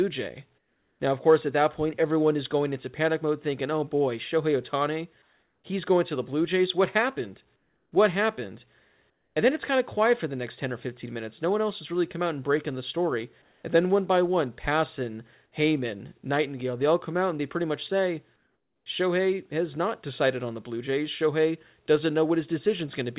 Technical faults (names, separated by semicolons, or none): comfort noise in place of the background